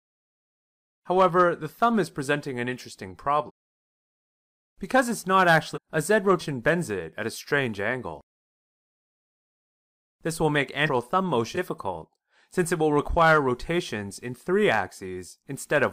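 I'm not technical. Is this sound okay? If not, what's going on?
No. The sound jumps ahead five times, at 3.46, 5.74, 6.39, 10.85 and 11.54 s, losing between a fifth of a second and a full second each time. This is compressed frames skipped: chunks of the file are missing or damaged, so playback leaps forward.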